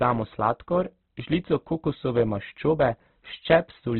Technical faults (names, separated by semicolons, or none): Opus compression